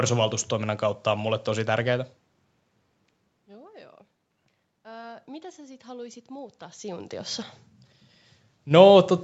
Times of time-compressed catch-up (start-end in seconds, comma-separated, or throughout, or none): none